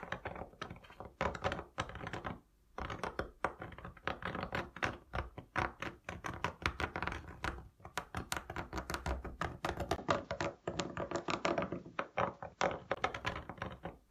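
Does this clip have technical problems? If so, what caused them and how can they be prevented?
Yes. The input likely switched to a poorer device from 9.96 to 12.96 s. After a 20 ms gap, the sound turns dull with nothing above 7.5 kHz. Its level shifts by around 5 dB and a new, low background noise appears until it clears again. Locking the recording to one fixed input device prevents this.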